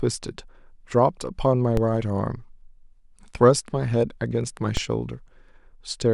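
At 1.77 s there's a DC step: the waveform's zero line suddenly jumps by about -12 dBFS, the kind of thing an input with an offset being switched in would produce. You hear it as a short, low thump under the speech, which itself carries on untouched. The offset doesn't hold; it drains away through a 20 Hz high-pass within a few tens of milliseconds. The same step and thump come back at 4.77 s.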